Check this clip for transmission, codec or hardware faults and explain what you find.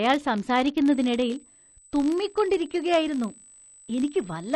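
Two faults show up in this speech clip, one running the whole way through and one joining in just under a second in.

The first is a filter restarted on every block, and it's there from start to finish. Some filter in the chain is dropping its internal state at each block boundary and starting from silence, so every block opens with a tiny transient. These arrive 50 times a second, which points to blocks about 20 ms long. You hear it as a 50 Hz buzz riding under the speech, getting louder and quieter as the speech does.

The second is USB whine, starting at about 0.92 s and continuing to the end. It's a steady, fixed-pitch tone at 8 kHz, which lines up with the USB bus's 125-microsecond microframes: the bus pulls current in that rhythm, and it leaks into the audio through the power or ground. It's fairly prominent, about 15 dB below the speech, so it reads as a thin, high whistle.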